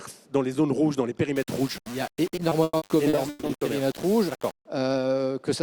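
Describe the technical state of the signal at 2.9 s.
At 2.9 s two faults overlap.

Low bit depth without dither runs from 1.36 to 4.65 s. The signal was likely reduced to about 5 bits by plain rounding, with no dither added, so the quantisation error tracks the waveform itself. The error sits roughly 20 dB below the signal, which is loud enough to give a coarse, grainy distortion whose texture shifts with the sound. Quieter passages crumble into grit or sputter between steps.

Repeated packet loss (robotic sound) covers 2.35 to 3.51 s. Packets kept going missing in nine separate gaps, the longest 140 ms. The receiver patched each hole by extending the last stretch of audio, concealing 440 ms in all, about 38% of that span. The result is choppy, with audible pieces dropped out, layered on top of the bit-depth grit.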